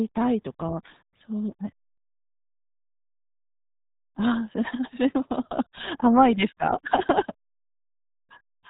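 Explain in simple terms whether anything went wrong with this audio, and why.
The speech was squeezed through the RealAudio 14.4 codec, an old dial-up-era format that heavily compresses the signal. From start to finish, nothing above 3.8 kHz survives, so the voice sounds muffled and gargly, as if heard through a cheap phone.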